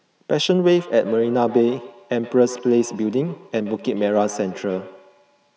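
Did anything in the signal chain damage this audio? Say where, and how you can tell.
Yes. From 0.64 s to the end, the speech carries a feedback echo between two devices: each word returns at roughly a tenth of a second, repeating as thinner, ringing copies that peak at about 17 dB below the speech. The damage happens in the acoustic loop of the call. A second device in the room plays this microphone's signal back into it, and the echo canceller cannot remove sound it did not play itself, so the echo keeps coming back.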